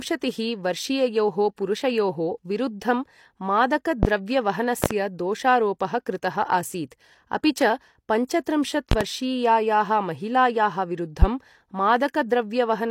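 Pre-echo appears at 1.56 s in this speech clip: a transform codec spread quantisation noise across the block containing a sharp attack, so about 18 ms of hiss leads it and the onset smears. It returns at 4.26 s (18 ms) and 8.27 s (15 ms).

A loud pop sits at 4.03 to 4.07 s, a single sharp pulse about 20 dB above the speech, which continues beneath it. A pair follows at 4.84 to 4.94 s, another pair at 8.92 to 9.04 s, and a single pop at 11.22 to 11.26 s. The cause is likely a voltage step or glitch added to the signal.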